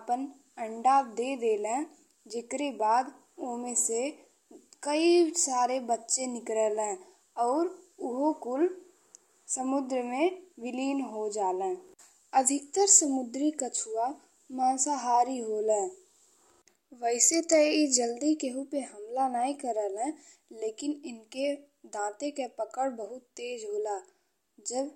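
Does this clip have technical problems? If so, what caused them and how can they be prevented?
No, there are no technical faults to point to in this clip. With nothing going wrong, there is nothing here that calls for prevention.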